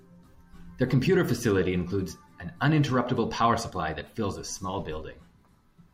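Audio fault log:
No technical faults are audible anywhere in the recording; the speech signal stays intact and continuous, with nothing pointing to a problem in capture, processing or playback.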